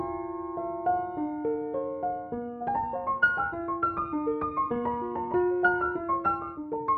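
Software processing likely stretched the back part of the audio to fit a shorter length, squeezing it to roughly twice its original pace while holding its pitch by dropping short pieces. The result is a time-stretched section running from 2.3 s to the end of the clip, where the pace abruptly jumps to about 1.96 times the earlier speed with no change in pitch, leaving that stretch audibly rushed.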